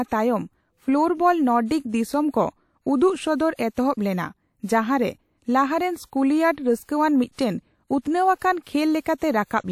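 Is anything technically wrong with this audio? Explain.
Yes, the speech carries pre-echo at five points: 1.66 s, 4.65 s, 6.83 s, 8.38 s and 9.01 s. The transform codec spreads quantisation noise, sized for each sharp onset, across its whole block, so a short hiss of 33 to 57 ms runs ahead of the attack and leaves it softened and smeared.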